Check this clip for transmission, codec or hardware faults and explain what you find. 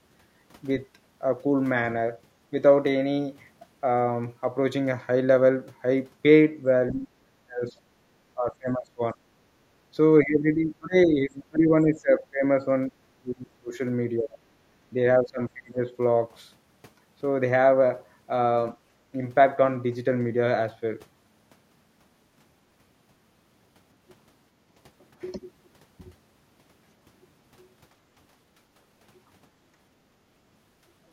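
The clip has two echo-canceller problems, both between about 7 and 16 seconds.

Speech suppressed in double talk: the speech dips or breaks up at 6.92–7.71, 8.34–9.18, 10.21–13.74, 14.17–14.38 and 14.93–15.87 s, by roughly 20 to 35 dB. The likely cause is the canceller mistaking the talker for loudspeaker echo while the far end talked and pulling both down.

Background gated by the echo canceller: at 9.55–9.68 s the room tone drops about 7 dB for a brief moment, as the canceller clamps the mic during far-end playback, then recovers.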